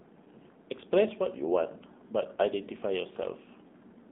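From start to finish the speech carries the sound of an AMR narrowband mobile codec, with plainly audible damage. The audio is confined to roughly 200 Hz to 3.7 kHz, so it sounds thin and boxed-in, and the vocal-tract model rebuilds the voice from sparse pulses, giving a buzzy, synthetic edge that fits a low rate around 7.4 kbps. A spectrogram shows a hard ceiling near 3.7 kHz with empty space above and a thin floor below 200 Hz.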